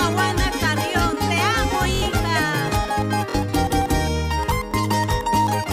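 At 1.95–2.02 s, 3.30–3.34 s and 4.71–4.74 s, repeated buffers: fresh audio arrived late, so the same 23 ms slice replayed, which fits a 1024-sample buffer. Each is a brief stutter, showing as identical copied waveform blocks with hard joins and vertical spectrogram lines.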